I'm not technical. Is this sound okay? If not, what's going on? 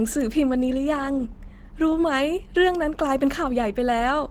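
No. Throughout the speech there is plainly audible Opus compression, likely from heavy data-saving: voices sound hoarse and grainy, not watery or swirling like MP3, and the highest treble remains.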